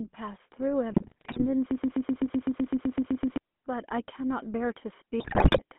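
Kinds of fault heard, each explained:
GSM full-rate codec: The speech runs through a vocal-tract model excited by sparse regular pulses, at a rate consistent with 13 kbit/s, and the band sits inside a telephone line of roughly 200 Hz to 3.4 kHz. The damage is plainly audible for the whole clip, with a buzzy, gravelly roughness over every syllable and no content above the line band, so the speech sounds thin and coarse.
GSM bit errors: Corrupted parameters reach the decoder, so filter, pitch and gain values go wrong frame by frame and the spectrum warps or the level jumps. Two bursts occur. The first, from 0.92 to 1.43 s, breaks into squawks and gargling across a run of frames. The second, from 5.2 to 5.59 s, is denser, which fits a higher error rate on a weaker link.
Broken-record loop: From 1.71 to 3.37 s one fragment of about 127 ms repeats exactly, back to back, thirteen times, giving a rapid mechanical stutter. 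The repetition likely comes from a stalled player, encoder or stream re-sending the last buffer it held. The speech that should have filled those 1.7 seconds never arrives, so that stretch is missing.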